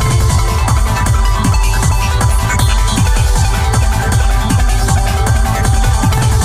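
Nothing stood out on listening to the audio.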